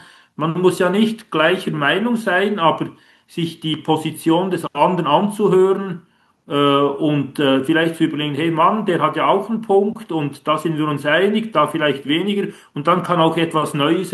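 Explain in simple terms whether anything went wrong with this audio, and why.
Nothing went wrong: the speech came through an ordinary internet call connection working as designed, which trims the sound above 12 kHz and adds only the normal coding texture of such a link.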